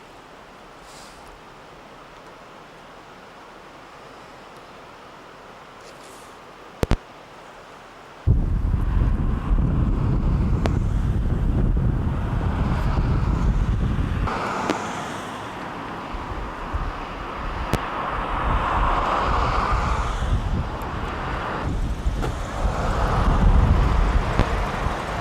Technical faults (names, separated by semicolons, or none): loud pop